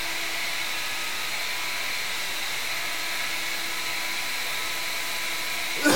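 Everyday sounds carry low bit depth without dither throughout, with grit that tracks the signal. It is likely truncation to 5 bits, with error roughly 10 dB down.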